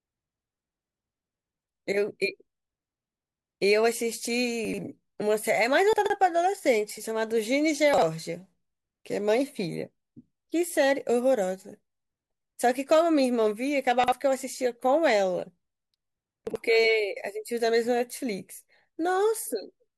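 Chunks out of order occur at 4.65–4.78 s, 5.93–6.10 s, 7.94–8.02 s, 14.04–14.12 s and 16.47–16.56 s. Blocks of about 43 ms play one to three positions late, making brief jumbled stutters. Waveform and spectrogram show abrupt vertical discontinuities at each join.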